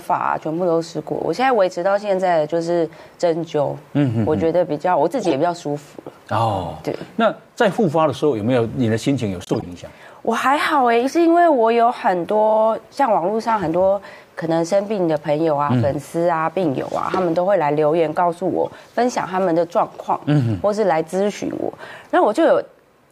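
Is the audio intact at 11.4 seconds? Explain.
Yes, at 11.4 s the audio is intact, with no dropout, click or other fault at that point.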